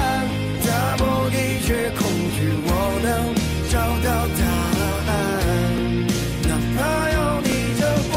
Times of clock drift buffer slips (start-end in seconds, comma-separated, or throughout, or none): 0.55-7.52